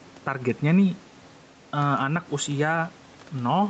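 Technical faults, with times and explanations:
Throughout: gain pumping. The level control appears to be reacting to each loud sound, likely because the input gain is set far too high and a fast limiter or compressor keeps pulling it back down. Across the speech the level swings by roughly 5 dB. Loud and quiet passages sit closer together than they should, giving a squashed quality over the faint room noise.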